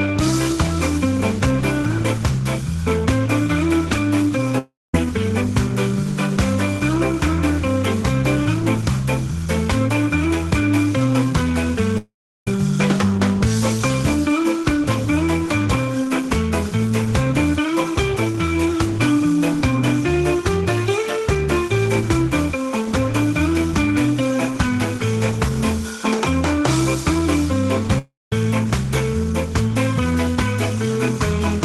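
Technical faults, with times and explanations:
4.58 to 4.94 s, 11.97 to 12.47 s and 27.98 to 28.32 s, long network dropout: the sound smears into a brief fading buzz, then falls silent for about 0.2, 0.36 and 0.2 s before resuming with 0.36, 0.49 and 0.33 s gone, likely from packets lost while the receiver briefly extended the last audio.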